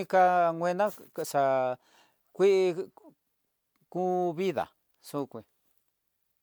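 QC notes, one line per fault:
No faults heard in this recording.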